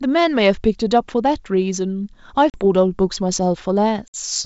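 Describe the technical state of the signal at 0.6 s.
At 0.6 s the speech is intact, with nothing wrong at that point beyond the faint character of the G.722 wideband telephone coding at 64 kbit/s.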